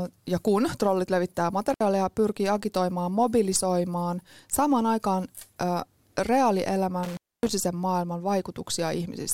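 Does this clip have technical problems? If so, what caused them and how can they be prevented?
Yes, there's an intermittent contact fault in this speech clip, hitting twice. Around 1.70 to 1.81 s the signal drops out for about 65 ms, and again from 7.03 to 7.50 s it's gone for roughly 260 ms. Each time you get a crackle as the connection breaks and remakes, with faint hiss in the gap, which is what a loose cable or plug briefly losing contact sounds like. To prevent it, reseat or replace the suspect cable and plug, and make sure they're secured so they can't wiggle during the take.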